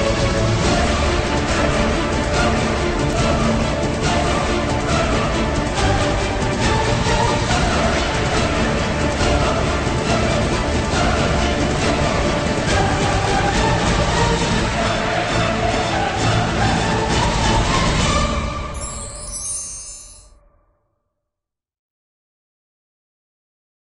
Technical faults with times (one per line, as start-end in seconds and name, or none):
none